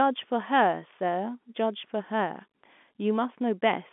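Nothing goes wrong anywhere in this bit of speech, which simply carries the narrow, boxy sound of ordinary G.711 telephone coding, with the band held to roughly 200 Hz to 3.5 kHz as a phone line keeps it.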